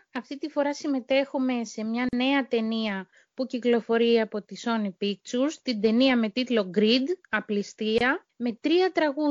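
From start to finish the audio has a watery, swirling quality: the top end stops abruptly at a fixed ceiling, faint high detail flickers in and out, sharp hiss-like and bright transients turn into metallic chirps, and attacks sound softened. This is likely MP3 compression under a tight bit budget. The encoder discards the top band and drops weak spectral lines that reappear unpredictably from frame to frame. The damage is plainly audible and points to a bitrate near 64 kbps.

At 2.09 s the sound drops into a silence of about 42 ms, ending at 2.13 s. At 7.98 s a second, shorter silence of about 25 ms runs to 8.01 s. Each one is a gap at a join of encoded pieces. The audio was encoded in separate sections and spliced without removing the encoder's start-up delay or the padding in each section's last frame. The signal then continues exactly where it left off. The codec smears both edges of each gap.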